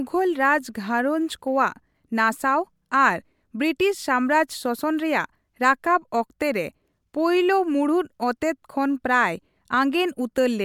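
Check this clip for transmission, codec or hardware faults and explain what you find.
Nothing stood out on listening to this speech recording; no transmission, codec or hardware problem is apparent.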